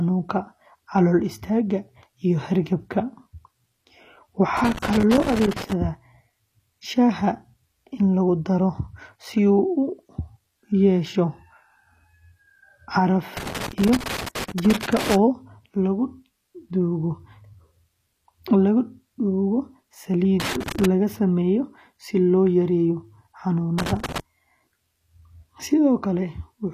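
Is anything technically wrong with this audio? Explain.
Yes. Throughout, the treble above the lower band sounds synthetic and gritty on s sounds, with nothing above 14.9 kHz. This is likely HE-AAC compression at a low bitrate, around 24 kbps. It copies lower bands upward instead of simply dulling the top like a plain low-pass filter.

Loose connector crackle appears at 4.57–5.73 s, 13.37–15.16 s, 20.40–20.85 s (just before "sameeyo si") and 23.79–24.20 s. A contact making and breaking chops the signal into irregular scratchy bursts, unlike steady codec grit.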